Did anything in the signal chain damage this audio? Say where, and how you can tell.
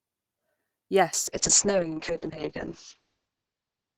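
Yes. A call bitrate drop hits the codec stage from 1.14 s to the end. The encoder falls from 48 to 6 kbps. Bandwidth shrinks from 20 kHz to 8 kHz. The speech turns muffled and coarse. The lowest rate holds for 1.39 s.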